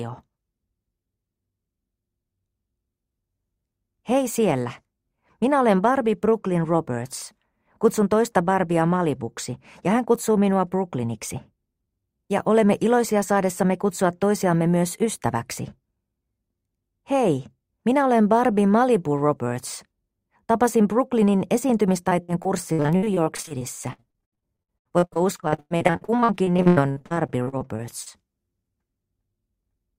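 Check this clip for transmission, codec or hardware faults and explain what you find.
One transmission fault is present: repeated packet loss, which produces robotic sound from 22.09 s to 28.08 s. Over these six seconds, dozens of short dropouts follow one another closely. The longest lasts 103 ms. The receiver conceals each hole by extending the last sound it received, and about a third of the stretch is filled this way. Because the holes come so close together, the sound turns choppy, with audible pieces missing.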